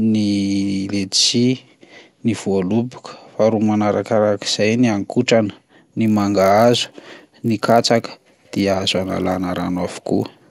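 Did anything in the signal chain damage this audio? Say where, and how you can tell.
Yes. From 6.06 s to the end of the speech, a steady buzz at 50 Hz sits under the signal, present only while there is sound, like a rapid train of tiny ticks. This is a resampler restarted on every block at the sample-rate conversion stage. Each 20 ms block was converted alone, so its edges were computed against silence or the block's own far end rather than its true neighbours. The resulting edge errors repeat fifty times a second. The upsampling ratio fits a 24 kHz to 48 kHz conversion.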